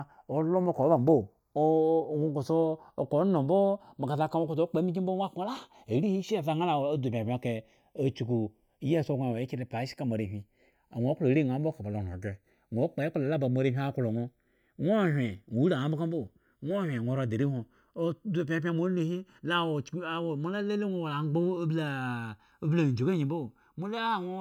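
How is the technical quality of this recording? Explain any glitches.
A slow, sweeping flange runs through the whole recording, so the technical quality is compromised by one fault: the channels drifting apart. From start to finish, summed to mono, the speech takes on a hollow, swirling colour as comb notches glide through the spectrum. The two channels were likely captured on separately clocked devices differing by a few tens of parts per million, so their offset creeps up to under a millisecond.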